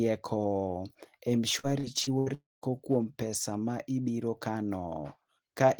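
From 1.59 to 2.29 s the speech turns choppy, with small pieces missing. This is repeated packet loss (robotic sound): four gaps, the longest 75 ms, were patched by stretching the preceding sound, covering about a quarter of that span.

At 2.34 s the audio gives way to a fading buzz that sinks into near-silence for about 0.19 s before speech resumes at 2.65 s with roughly 0.28 s of it gone. This likely reflects a long network dropout, with the receiver extending the last sound until it died away.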